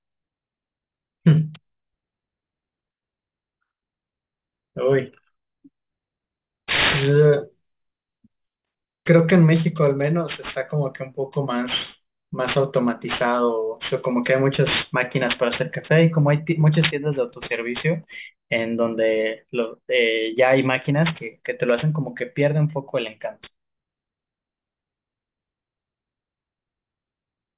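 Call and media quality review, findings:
Aliasing throughout the speech: gritty, metallic sibilants, with energy running hard up to a 4 kHz band edge. Points to resampling to 8 kHz without an anti-alias filter, so content above 4 kHz folds back as unrelated tones, fairly strong. Plain band-limiting would sound dull, not harsh.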